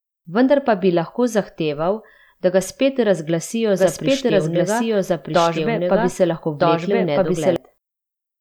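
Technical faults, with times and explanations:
3.78–7.56 s, doubled audio track: after "da ga spet razglasijo", an equally loud dry copy trails roughly 1.5 s behind, starting and stopping abruptly, likely from a second, slower capture path.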